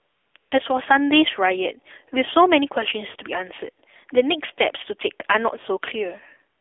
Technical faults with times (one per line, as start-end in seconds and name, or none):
0.00-6.61 AMR narrowband mobile codec
0.00-0.52 AMR comfort noise
6.60 AMR comfort noise